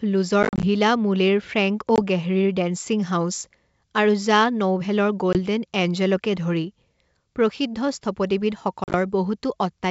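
Speech with packet loss on an ADPCM call at 0.43–0.66 s, 1.96–1.99 s, 5.33–5.37 s and 8.84–8.95 s. Lost packets leave hard silent gaps. The decoder's predictor then drifts, so sound resumes briefly unsettled.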